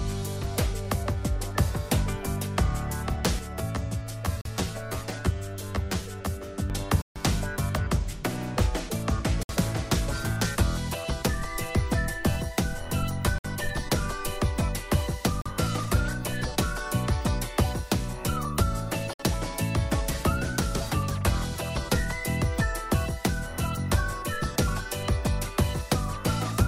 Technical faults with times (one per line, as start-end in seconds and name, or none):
3.39-6.70 channel delay (comb filtering)
4.41-4.45 Bluetooth dropout
7.02-7.16 Bluetooth dropout
9.43-9.49 Bluetooth dropout
13.38-13.45 Bluetooth dropout
15.42-15.46 Bluetooth dropout
19.13-19.20 Bluetooth dropout